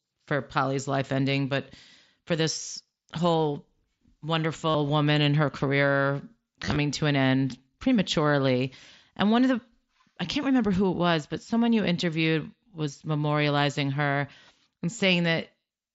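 At 4.70 s and again from 6.64 to 6.76 s, concealed Bluetooth headset packet loss repeats recent waveform, giving brief buzzy patches seen as smeared repeated cycles on the waveform.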